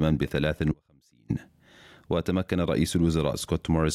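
At 0.72 s the sound abruptly drops out for about 0.58 s, leaving just a faint trace roughly 35 dB down, likely an audio dropout to a faint residue.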